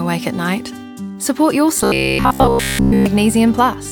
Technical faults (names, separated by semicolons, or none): robotic sound from repeated short buffers